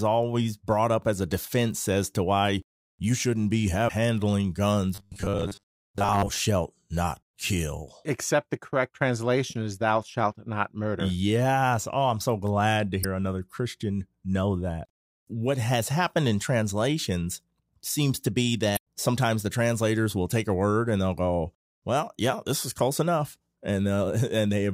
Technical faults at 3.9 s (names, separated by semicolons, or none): damaged data in a compressed stream